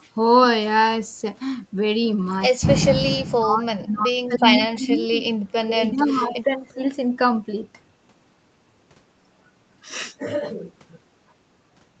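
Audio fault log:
3.16–4.44 s, 4.74–5.21 s and 5.64–6.82 s: speech suppressed in double talk. The speech sinks in level and thins out, dropping by roughly 35 dB in the first stretch, about 25 dB in the second and about 15 dB in the third, with roughly a second of the first and third runs affected. The likely cause is an echo canceller that, with both ends talking at once, could not tell the near talker from loudspeaker echo and attenuated both.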